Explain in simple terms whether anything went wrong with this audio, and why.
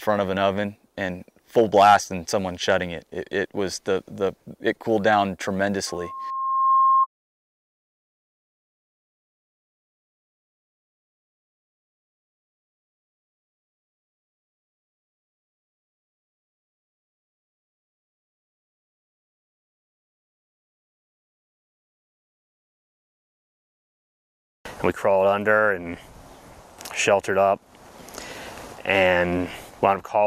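From 5.87 to 7.07 s there is loudspeaker feedback squeal: a microphone picked up its own loudspeaker, and the sound looped round, growing at a single pitch near 1.1 kHz. It swells over about a second until it is louder than the audio itself.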